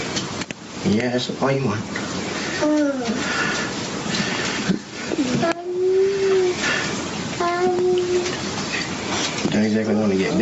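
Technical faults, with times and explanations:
Throughout, gain pumping: the input gain was likely set far too high, so a fast limiter clamps down on each loud sound, swinging the level by about 15 dB. Loud and soft parts are squashed together.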